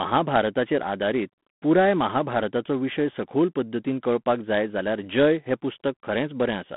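Speech squeezed through G.726 ADPCM the whole way: a harsh, rasping hiss riding the level, narrow 150 Hz to 3.5 kHz band, nothing above 3.8 kHz, which fits 24 kbit/s.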